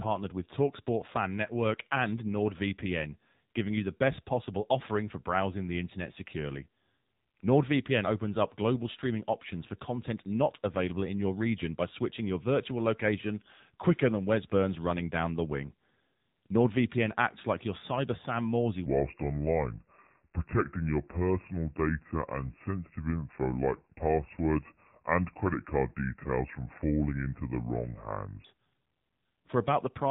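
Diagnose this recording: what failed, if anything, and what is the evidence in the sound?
AMR narrowband mobile codec, throughout the clip, at the codec stage. The speech has nothing above 4 kHz, which points to an 8 kHz sampling rate, and it sounds buzzy and synthetic. The encoder rebuilds the voice from a vocal-tract filter excited by a few pulses in each 5 ms subframe. At this low rate, which fits the 7.4 kbps AMR-NB mode, that sparse excitation cannot carry the natural texture of the voice, so the damage is plainly audible.

Section at the wrong speed, from 18.86 s to 28.45 s, at the storage or playback stage. For these 9.6 seconds the speech runs at 0.731 times its proper speed and sits about five semitones lower, so it sounds deep and dragged. Pitch and tempo shift together, so this is a resampling or clock error, not a pitch effect. The likely cause is an editor or player that handled this stretch against the wrong clock rate.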